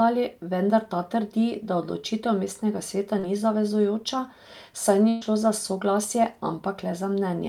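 At 3.19 to 3.25 s, right after "da odločitev mestnega sveta" and before "ni zavezujoča", the speech briefly smears and wobbles. This is short concealed packet loss: about 40 ms of audio arrived too late, and the receiver bridged roughly 36 ms by extending the preceding sound before blending back.

From 5.09 to 5.23 s, just before "šlo za soglasje", the last sound is held and fades away with no true silence, then the speech resumes further along. That is a burst of packet loss: about 120 ms went missing, and the receiver filled roughly 123 ms by continuing and fading the last sound, so that stretch of speech is lost.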